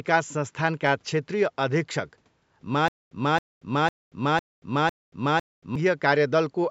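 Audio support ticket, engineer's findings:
Stutter with silent gaps, 2.88–5.76 s. A 272 ms fragment replays 5 times at an even 503 ms period, each followed by 230 ms of digital silence. The likely cause is a playback/stream buffer stall, with the last fragment re-sent on each retry. The audio that should have played there is lost. Call microphone processing path: content stops at 8 kHz.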